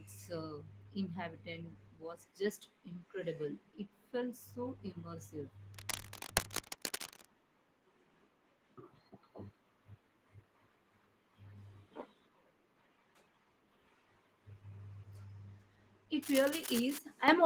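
A speech clip with two bursts of scratchy, rustling noise, from about 5.74 to 7.26 s at roughly the level of the voice, then 16.22 to 16.99 s a little quieter. That's cable scratch noise, likely from a worn lead or connector being moved. Right at the end, at 17.28 s, the microphone volume is stepped up: voice and background both jump by about 9 dB at once, as if the call software decided the mic was too quiet.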